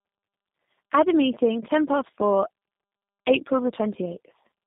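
Speech clip with tandem speech coding throughout: it sounds rough, muffled and warbly, with nothing above 3.8 kHz, consistent with two passes of a low-bitrate codec such as G.729A stacked end to end.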